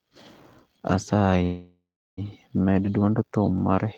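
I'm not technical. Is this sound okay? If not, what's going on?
No. From 1.43 to 2.20 s the speech stalls: the last sound drags on as a fading buzz, then about a third of a second of silence, and the speech resumes exactly where it stopped. This is a call audio freeze, likely from delayed network packets. Unlike a dropout, nothing is lost; the speech is just pushed later.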